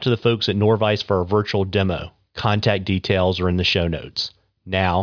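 No technical faults are audible anywhere in the speech.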